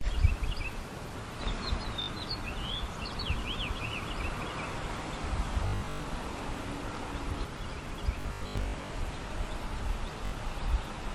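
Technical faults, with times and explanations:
2.02–2.08 s, Bluetooth stutter: about 61 ms lost, the last short slice replayed as a brief buzz. The waveform shows identical repeated cycles, which fits three dropped packets.
5.67–6.04 s, Bluetooth stutter: 264 ms lost, scattered across 366 ms, with the longest run at 102 ms. It sounds like machine-gun stuttering, and the spectrogram shows striped, copied blocks.
8.21–8.90 s, Bluetooth stutter: 427 ms lost, spread over 691 ms, with the longest run at 81 ms. Repeated slices form a rattling buzz, and the sound then jumps ahead. The waveform shows tiled patterns.
10.26–10.32 s, Bluetooth stutter: about 61 ms lost, with one short slice looped until data returned. It sounds like a quick buzz, and the spectrogram shows a brief vertical striping.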